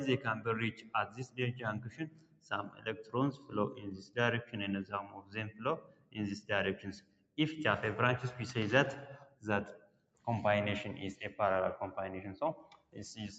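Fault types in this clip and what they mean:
Noise suppressor applied to music or sounds: a speech-tuned suppressor stays on throughout, swinging level by around 20 dB so sustained sound pumps and thins, unlike a clean gain change.
Sound cut by the noise suppressor: steady or decaying passages dip by about 15 to 16 dB while sharp onsets survive, a partial sinking rather than a complete dropout.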